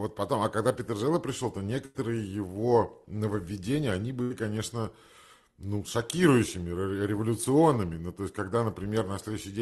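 At 1.85 to 1.96 s and again at 4.22 to 4.32 s there is a burst of packet loss. About 100 ms and then 80 ms of the call arrived too late or not at all. Each time, the receiver extended the last sound and faded it down, producing a held buzz or dimming hiss. Playback then picks up further along, with the missing stretch simply gone. The Opus path's band limit near 12 kHz shapes what is held.

At 7.44 to 7.48 s a short concealed packet loss occurs. About 20 ms failed to reach the decoder, and the receiver synthesised a continuation from the preceding sound before crossfading into the real audio again. The result is a brief smear or wobble, and a short consonant there may drop out.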